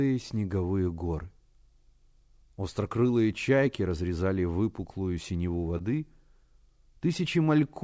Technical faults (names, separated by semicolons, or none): short concealed packet loss